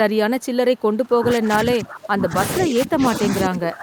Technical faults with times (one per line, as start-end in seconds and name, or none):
0.41-0.46 echo leak
0.77-0.81 echo leak
1.01-3.82 speech suppressed in double talk